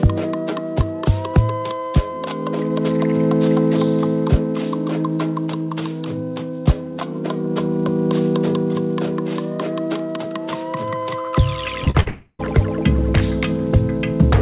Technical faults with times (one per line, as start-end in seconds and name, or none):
11.84-11.96 short concealed packet loss
12.00-12.08 burst of packet loss
12.08-12.41 long network dropout